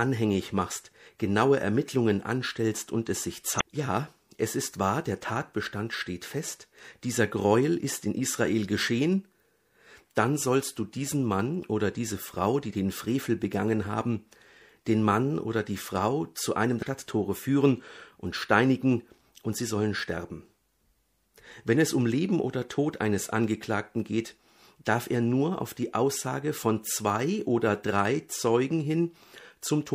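Throughout, the speech sounds watery, with dull treble and chirpy s sounds. This is likely MP3 compression starved of bits, as fits a bitrate near 64 kbps. Brief blips at 3.57 to 3.61 s and at 16.81 s come from damaged data in a compressed stream, where corrupt frames threw the decoder out of sync.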